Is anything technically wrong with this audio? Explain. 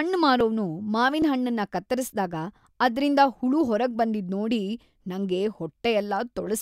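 Yes. There are two dropped buffers (overruns), at 0.41 s and 1.22 s, the second just before "ಕತ್ತರಿಸ್ದಾಗ ಅದ್ರಿಂದ ಹುಳು ಹೊರಗ್ಬಂದಿದ್". Each is a small jump in the speech. A few milliseconds are missing and the edges are butted together, likely because samples were overwritten before being read.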